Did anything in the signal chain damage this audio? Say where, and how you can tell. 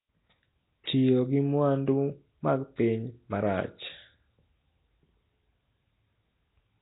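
Yes. The codec stage likely did it: the speech shows Nellymoser compression throughout, with heavy damage. Nothing survives above about 3.8 kHz. Block coding at roughly two bits a sample, which fits 16 kbps, starves weak bands and fills them with noise, leaving a hissy halo and smeared, underwater voice.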